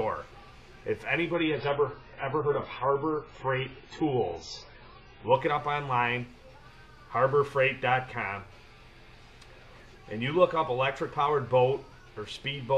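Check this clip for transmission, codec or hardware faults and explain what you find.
There's one fault: from 1.34 to 5.34 s the adaptive stream drops to a lower bitrate. The audio abruptly loses everything above 7.5 kHz and turns smeared and artefact-laden, which points to the player switching to a much leaner AAC rendition, then snapping back without any gap.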